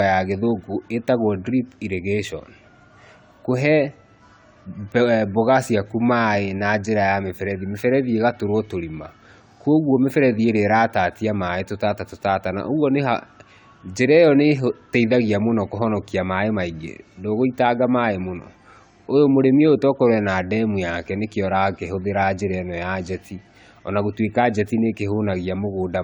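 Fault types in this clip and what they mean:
Generation loss: The speech was likely decoded and re-encoded around seven times through a lossy codec, which fits AAC-LC at 96 kbit/s. Each pass adds fresh quantisation noise, so the speech sounds swirly, smeared and hollow throughout, with blurred attacks and nothing above 20 kHz.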